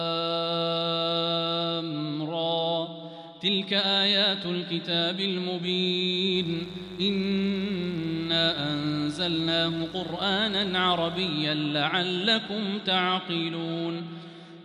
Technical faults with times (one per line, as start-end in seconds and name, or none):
6.34-11.28 mains buzz